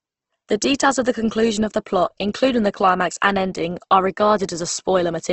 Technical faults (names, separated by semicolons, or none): Opus compression